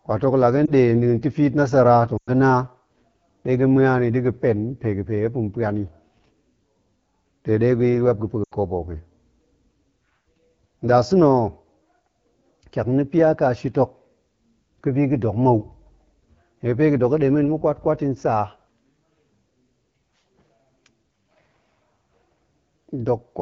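From start to finish the speech sounds rough and raspy, with a grainy, buzzy edge. This is the AMR wideband (HD Voice) codec running at one of its lowest rates, which fits the 8.85 kbit/s mode. At that rate the pulse-driven model of the vocal tract cannot track the voice closely below 6.4 kHz, and the band from 6.4 to 7 kHz is filled with shaped noise.

At 0.65 to 0.72 s there is a brief dip and warble in the level, which fits a single lost AMR speech frame of about 20 ms. At 2.17 to 2.30 s about 100 ms of speech is lost: the sound drops to near silence within two frames, then returns weak and rough. At 8.44 to 8.53 s, just before "kobo hok i", a shorter loss of about 80 ms likewise drops to near silence. In each case frames failed their checksum, so the decoder reused the last good pitch and vocal tract settings with falling gain.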